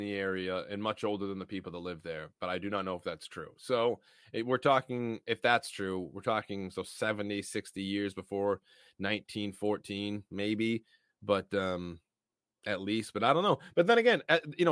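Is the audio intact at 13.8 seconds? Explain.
Yes, the speech at 13.8 seconds is intact, with no fault audible at that moment.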